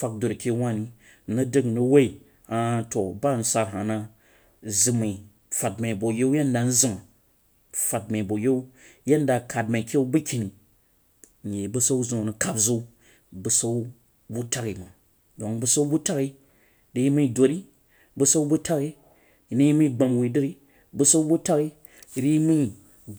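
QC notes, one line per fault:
No faults heard anywhere in the clip.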